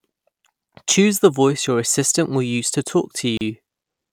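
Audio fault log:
3.37–3.41 s, gap at a join of encoded pieces: two separately encoded pieces were joined without trimming, so the encoder's start-up delay and the padding on the previous piece's last frame both stay in. Right after "assistant will use to", the speech drops into silence for about 36 ms, with edges smeared by the codec, then resumes exactly where it stopped. Only this one join falls within the clip.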